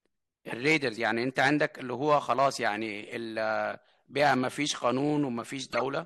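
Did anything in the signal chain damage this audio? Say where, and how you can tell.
Yes. A corrupt frame was decoded from 5.67 to 5.81 s, near the end of the speech: a short burst of squeaky noise, peaking roughly around -20 dBFS. This happened at the codec stage. Flipped bits in several consecutive compressed frames were decoded anyway, and the misread gains put energy at the wrong frequencies.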